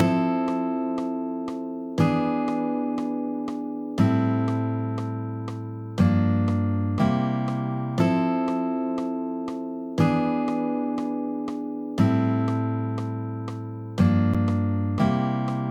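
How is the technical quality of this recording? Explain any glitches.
One glitch stands out. At 14.34 s the output buffer apparently went unfilled in time, leaving a block of digital silence about 10.7 ms long, which fits a 512-sample buffer. The sound drops out abruptly and returns, heard as a brief tick.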